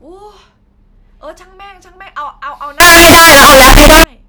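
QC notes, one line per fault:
2.80–4.04 s, signed and unsigned mixed up: 16-bit samples likely decoded with the wrong signedness. The flipped top bit turns every zero crossing into a full-scale jump, producing loud, harsh distortion.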